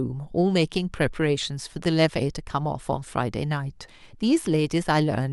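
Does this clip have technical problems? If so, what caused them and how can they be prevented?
Yes. Damaged data in a compressed stream shows up at about 3.88 s in this speech clip as a single brief blip. Some bytes in the compressed data were lost, overwritten or mixed with foreign data, so the decoder could not read the frame at that point. It lost sync and searched ahead for the next valid frame header, and that glitch is the blip. Prevention: carry the stream over a checked or reliable transport, and verify file integrity with checksums after transfer or storage.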